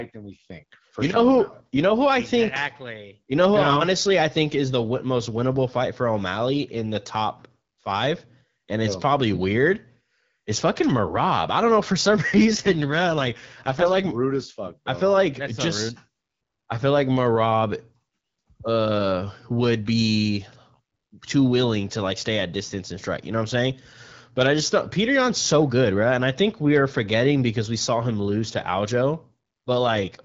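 An AMR rate drop hits from 12.18 to 14.04 s, between "don't know for some" and "rude as fuck", and again from 29.91 s to the end. The full band and continuity hold, but the speech turns rough and synthetic, which fits the codec being pushed from 12.65 to 6.6 kbit/s.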